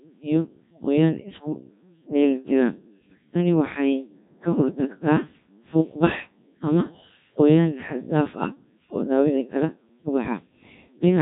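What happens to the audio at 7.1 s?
At 7.1 s the speech is still under the Codec 2 vocoder, which runs through the whole clip. The decoder rebuilds the voice from sine waves driven only by pitch, voicing, energy and a rough spectral envelope, so the original waveform is gone. The result is heavy, robotic buzzing with nothing above 3.8 kHz, which fits a rate near 1.3 kbit/s. Unlike simple band-limiting or a lossy waveform codec's smearing, the voice itself sounds synthetic.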